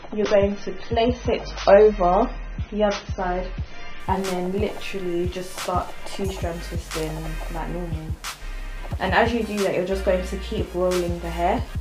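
From 0 to 4.0 s the audio plays as an adaptive stream starting at a low bitrate: nothing above about 6.3 kHz, with dull, smeared artefacts that fit roughly 24 kbit/s AAC. At 4.0 s the spectrogram's upper band abruptly fills in, without any gap in the waveform.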